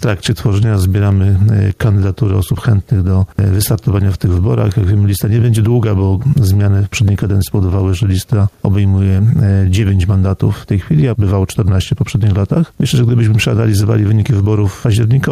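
Gain pumping runs through the whole clip. The level keeps breathing: the background rises during quieter stretches, then ducks each time a loud sound arrives, with a swing of around 5 dB. The cause is likely input gain set far too high, with a fast limiter or compressor clamping down on every peak and releasing in the gaps. Loud and soft passages sit unnaturally close in level, giving a squashed, pumping texture.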